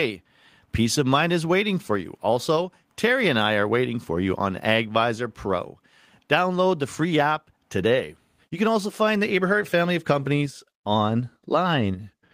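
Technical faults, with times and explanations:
No technical faults are audible anywhere in the clip.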